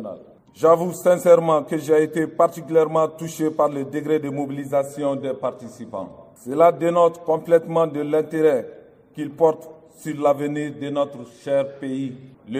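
No technical faults are audible.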